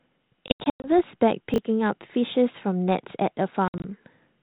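From 0.48 to 0.88 s the speech breaks up with packet loss on an ADPCM call: about 240 ms goes missing in hard-edged silent gaps spread over 360 ms, the longest 100 ms, roughly ten packets in all. Each time sound resumes it comes back slightly distorted, because the decoder's adaptive predictor and step size have drifted from the sender's and need some tens of milliseconds to resync. That recovery tail marks it as ADPCM state loss rather than a plain dropout. At 1.54 to 1.58 s, a 20 ms chunk plays one chunk late, so chunks are out of order. Nothing is missing, but the sound jumps briefly at the hard joins. There are no silent holes and no level recovery afterwards, which separates it from packet loss. From 3.68 to 3.87 s the packet loss returns: about 100 ms lost over 160 ms, the longest gap 60 ms, around five packets, again followed by brief distortion as the predictor catches up. The light band-limited coding noise throughout points to G.726 ADPCM at 32 kbit/s, the DECT rate.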